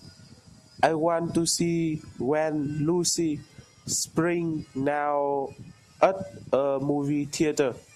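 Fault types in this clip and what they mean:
No fault types are present in this clip, so there is nothing to list.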